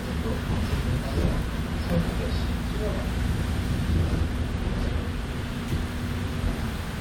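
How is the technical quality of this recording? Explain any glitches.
The technical quality of this recording is sound, with no glitches to explain.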